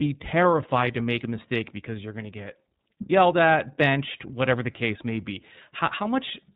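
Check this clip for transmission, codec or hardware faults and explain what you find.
One codec fault runs through the whole clip. The speech has passed through the iLBC codec, and the damage is plainly audible. Nothing above 4 kHz survives, so the voice sounds narrowband and muffled. Each frame's excitation is coded on its own, with no help from the frame before. That gives the voice a slightly rough, synthetic edge. The texture fits 30 ms frames at a rate near 13 kbps. The speech stays clear.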